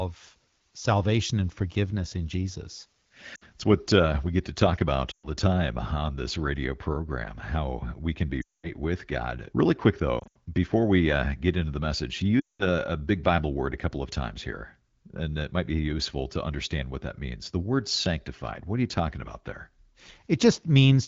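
Speech over a wideband phone link, and it has lost AMR speech frames at 3.35, 5.11, 8.42, 10.20 and 12.40 s. The decoder stretches the last good frame and fades it, so even the short 60 ms gap drops toward near silence. The 200 to 220 ms runs at 8.42 and 12.40 s drop to near silence before the sound comes back rough. The HD Voice coding fits roughly 12.65 kbit/s.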